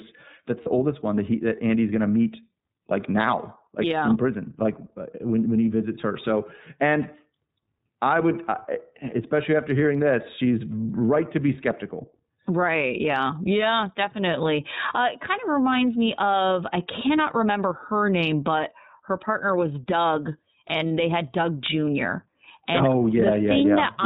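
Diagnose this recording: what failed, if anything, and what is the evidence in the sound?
iLBC codec throughout, at the codec stage: the speech is band-limited to 4 kHz with a plainly audible rough, synthetic edge, fitting iLBC's 30 ms frame, 13.33 kbps mode.

Lost iLBC frames at 0.63 to 0.69 s, a network fault just before "oldest one that he": the decoder repeats the last pitch cycle with noise, giving a brief buzzy held vowel that fits one lost 30 ms frame. The speech recovers at once.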